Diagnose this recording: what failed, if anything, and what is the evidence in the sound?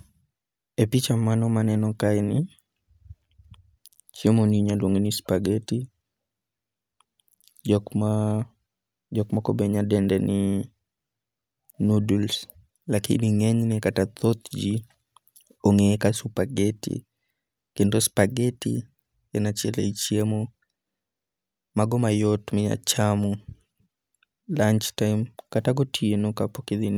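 Nothing in the speech signal points to a failure at any stage of the chain, from capture through to playback.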